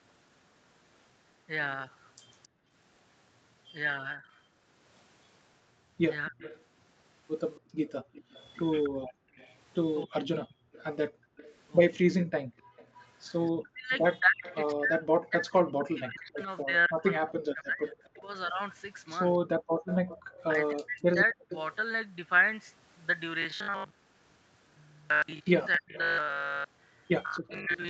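At 2.43 to 2.48 s a faint delayed copy of the speech slips through, about 30 dB below the talker and trailing by 269 ms. This is an echo leak, likely from a loudspeaker whose echo canceller let part of the returning sound escape. Right after, from 2.48 to 2.71 s, the room background sinks by about 35 dB for a fraction of a second and then returns. That is background gated by the echo canceller, which clamped its microphone while the loudspeaker played.

From 4.17 to 21.51 s the talker's speech repeatedly dips, dulls or breaks into pieces, by roughly 40 dB at worst and for about five seconds in total. This is speech suppressed in double talk. With both sides speaking at once, the canceller likely could not separate its own talker from the echo and turned everything down. Overlapping this, from 6.41 to 21.75 s, the 269 ms delayed echo comes back more strongly, at roughly 20 dB under the speech. 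Within that stretch, between 7.61 and 12.76 s, the background drops out by about 40 dB in short gated bursts adding up to under a second. Another brief 40 dB gate follows at 19.80 to 19.84 s.

Near the end the same pattern returns. The speech is suppressed between 25.77 and 27.71 s, for roughly 0.4 s in total and by about 40 dB at most. The echo is audible again from 25.94 to 27.36 s, about 20 dB down, with the same 269 ms lag.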